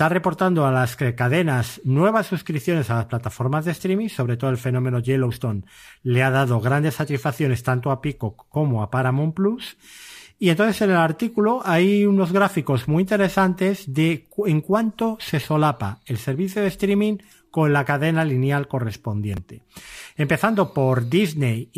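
At 19.34 to 19.38 s, chunks out of order: one 10 ms chunk plays three chunks late, producing a brief jumbled flicker. The waveform shows three hard discontinuities across those 40 ms, and the spectrogram shows thin vertical broadband lines at each join.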